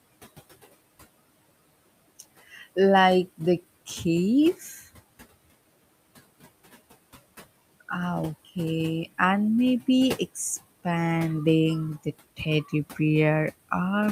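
From 4.54 to 4.86 s, speech is cut by the noise suppressor: it mistakes part of the speech for background and turns it down by up to about 10 dB, over roughly 150 ms in total. The affected sounds come out swallowed and faint. On a waveform the envelope dips; a spectrogram shows the speech energy, especially the weaker high-frequency detail, thinning toward the level of the room noise, which sits about 20 dB below the speech.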